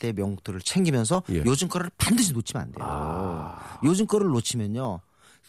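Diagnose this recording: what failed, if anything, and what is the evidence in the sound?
Buffer stage: about seven regular clicks in the speech, every 0.74 s from 0.40 to 4.85 s. Likely clock drift buffer slips from two clocks roughly 500 ppm apart.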